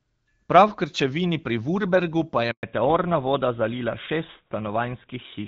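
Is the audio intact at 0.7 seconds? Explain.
Yes, the audio is intact at 0.7 seconds: no fault occurs there, and the speech at that moment is carried cleanly through the AMR wideband (HD Voice) codec at 12.65 kbit/s.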